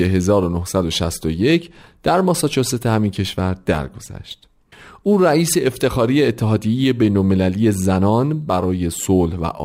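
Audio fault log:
throughout: crude rate conversion. The speech carries a gritty, inharmonic fizz that rises with louder and brighter syllables. The grit fits a 44.1 kHz to 48 kHz change made by simply repeating the nearest sample, about one extra copy every twelve samples, with no interpolation filter. The repeats recur in a fixed pattern, creating distortion tones unrelated to the voice's pitch, sitting roughly 25 dB below the signal.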